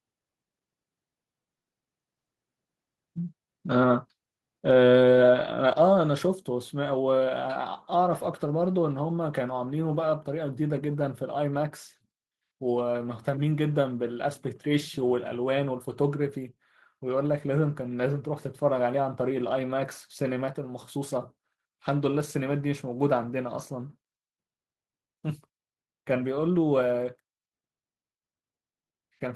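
A speech recording with one microphone volume stepped down at 5.73 s, where voice and background together drop by about 5 dB in a single step. The waveform envelope narrows abruptly there and the spectrogram darkens evenly across all frequencies, likely from call software lowering the input gain.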